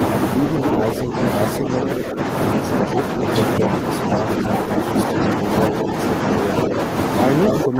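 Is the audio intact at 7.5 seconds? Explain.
No. From 7.47 s to the end of the clip at 7.79 s, this is speech suppressed in double talk. The echo canceller was most likely faced with both sides talking at once, couldn't tell the local talker from the returning loudspeaker sound, and pulled everything down together. The voice dips sharply, by something like 20 dB at its deepest, and thins or breaks up across roughly a third of a second, so the moment at 7.5 s is already affected.

Inside that span, from 7.59 s to 7.67 s, there is also an echo leak. The far end's canceller likely failed to strip out all of what its microphone picked up from its own loudspeaker, and the remainder was sent back. It arrives as a copy of the voice delayed by 225 ms, only a few decibels quieter than the speech itself. The result is a short, ghostly repeat that smears over the suppressed voice.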